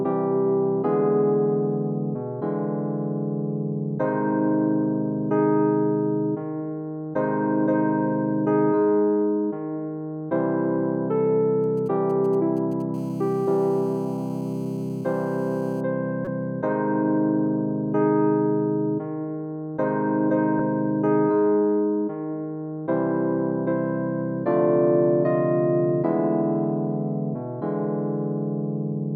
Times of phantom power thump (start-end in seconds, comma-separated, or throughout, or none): none